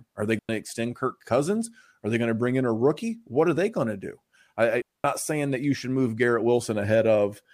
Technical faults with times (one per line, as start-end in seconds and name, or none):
0.39-0.49 digital wireless dropout
4.82-5.04 digital wireless dropout